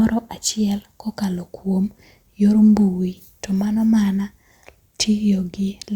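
No technical faults can be heard in this speech recording. Nothing in the audio points to a problem anywhere along the way it was captured, processed or delivered.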